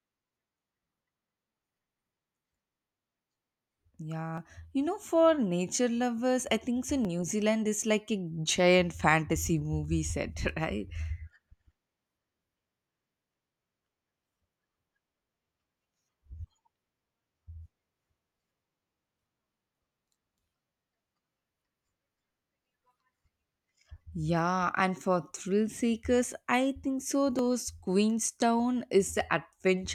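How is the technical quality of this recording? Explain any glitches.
Three short clicks in the speech, at 4.38 s, 7.05 s and 27.39 s. Each is a single sharp tick, likely dropped samples, with well under a millisecond of audio missing, so the waveform jumps straight to a later value and leaves a thin vertical line across the spectrum.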